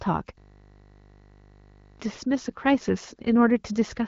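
A speech clip, carried through a wideband phone-style codec whose bandwidth ends near 7.4 kHz, breaks into a system hang loop from 0.38 to 2.0 s. The computer or driver froze while the hardware kept replaying one 20 ms stretch of its buffer, so a single fragment repeats about 80 times and is heard as a steady 50 Hz buzz. Unlike mains hum, the buzz replaces the speech entirely and takes its tone from the frozen fragment. Its perfectly regular repeats also set it apart from irregular packet-loss stutter.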